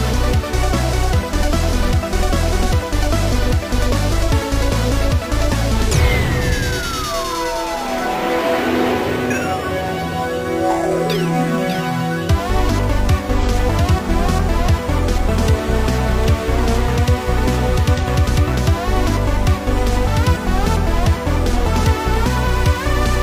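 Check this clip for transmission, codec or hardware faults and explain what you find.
Two short AAC frame losses with concealment occur, at 13.41 s and 17.97 s. Each is a brief smeared or noisy patch of about 43 ms, where one lost frame was filled in from the previous good spectrum rather than decoded, briefly blurring detail.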